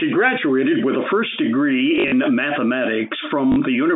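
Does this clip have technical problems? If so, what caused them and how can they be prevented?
Yes. Packet loss with last packet repeated occurs from 1.96 to 2.12 s, just after "graduated with a first", where about 100 ms of audio is missing in short gaps spread over 160 ms. The longest run is 40 ms. It occurs again from 3.52 to 3.56 s, with 40 ms lost. The receiver replays the last packet it got. The runs buzz at about 50 Hz, which fits 20 ms packets. That robotic stutter sets it apart from plain dropouts, which would leave silent holes instead of repeated sound. Through the telephone band the buzz sits alongside the G.711 coding, which itself causes at most faint damage. To prevent it, use a jitter buffer with proper packet loss concealment, or add forward error correction or redundancy on the network path.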